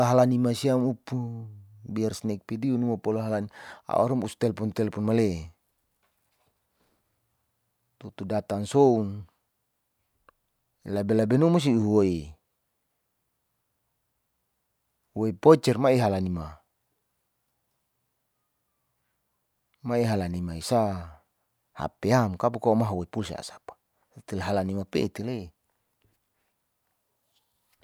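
No technical faults can be heard anywhere in the recording.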